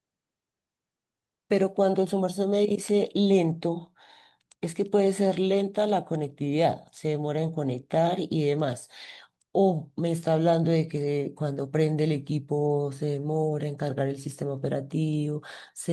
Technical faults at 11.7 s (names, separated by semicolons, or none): none